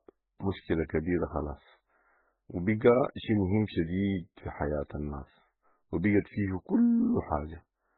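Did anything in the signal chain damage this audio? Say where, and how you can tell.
Yes, at the codec stage, across the whole speech clip. Nothing survives above 4 kHz. Two kinds of coding artefact are heard together. The likely cause is transcoding between lossy codecs. It fits a very low-rate MP3 pass re-encoded by Opus, which kept the narrow cut-off.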